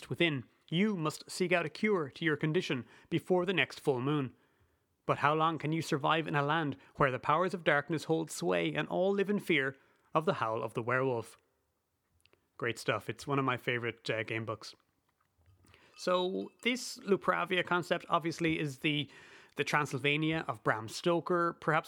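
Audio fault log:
Nothing to flag in this speech recording; no faults turned up anywhere along the way.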